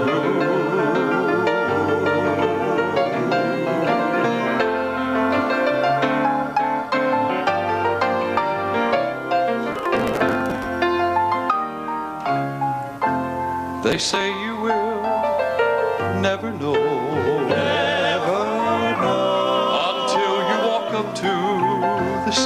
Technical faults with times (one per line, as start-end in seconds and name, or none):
9.72-10.66 processor overload crackle
13.90-14.21 processor overload crackle